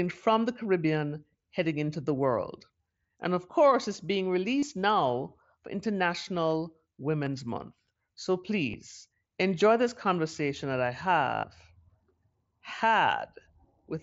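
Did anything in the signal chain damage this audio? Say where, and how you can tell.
Yes, concealed Bluetooth headset packet loss on the headset-to-phone link, at 4.59–4.63 s after "of course it's being", 7.25 s, 8.71–8.74 s, and 11.35–11.44 s after "this conversation that I". The receiver filled each gap by repeating recent waveform, so the 83 ms run buzzes before warbling back.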